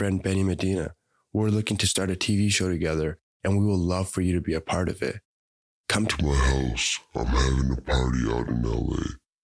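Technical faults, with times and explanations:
6.11–9.43 s, wrong sample rate: from here to the end the speech drops to about 0.69 times its speed and sinks roughly 6.5 semitones, low and dragging. Pitch and tempo fall together, which fits 32 kHz audio being played back at 22 kHz without conversion.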